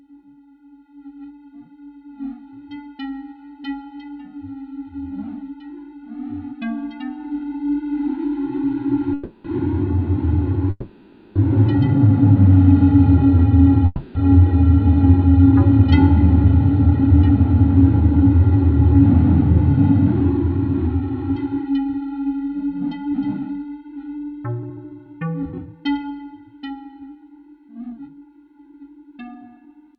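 Call audio freezes at 9.13–9.46 s, 10.70–11.37 s and 13.86–14.17 s stretch the last sound into a fading buzz of 0.31, 0.65 and 0.29 s. This is likely a late-packet stall, after which the audio resumes intact but later. Jitter buffer speed-up then trims pitch periods to recover delay: 16.86–17.30 s and 19.60–22.49 s run 8% fast, and 24.18–29.95 s runs 11% fast, hurried at unchanged pitch.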